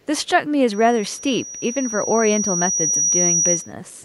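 Loudspeaker feedback squeal runs from 0.73 to 3.73 s in this speech recording: a single 5.8 kHz tone swells over roughly two seconds to sit about 5 dB above the speech, because a microphone is hearing the loudspeaker it drives and that loop's gain exceeds one at that frequency. Echo leak appears at 0.02–0.06 s, 1.14–1.22 s, 1.46–1.50 s and 2.74–3.11 s as a very faint copy of the voice trailing by 373 ms, slightly stronger in the last stretch, likely from a far-end echo canceller letting loudspeaker pickup through.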